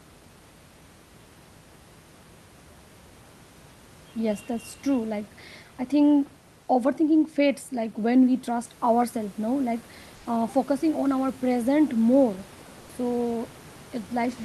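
Low bit depth with dither runs from 8.65 to 11.64 s. Across this stretch the speech is held at a very coarse resolution, which fits 8-bit samples, with dither added before each value is rounded. The rounding error therefore comes out as an even white hiss, roughly 30 dB below the speech, rather than as distortion. It sits steadily on top of the sound and stops cleanly at 11.64 s.

Comfort noise in place of the background appears inside that stretch, from 10.15 to 10.25 s, a gap of 100 ms. The room noise, about 28 dB below the speech, briefly gives way to a flat, featureless hiss about 1 dB quieter. This is likely discontinuous transmission: the sender's voice detector judged the moment silent and stopped sending, and the receiver filled the gap with synthetic noise shaped only broadly like the real background.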